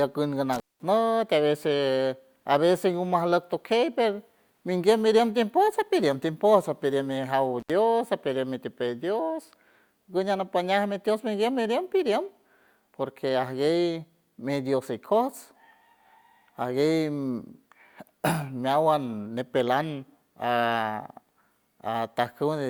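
Intermittent contact hits twice: from 0.53 to 0.83 s, just before "a veces a veces", and again from 7.60 to 7.72 s ahead of "apidiem mitipey". A loose connection breaks briefly, so the speech drops out for about 200 ms, then 72 ms, with crackle at each edge and faint hiss underneath.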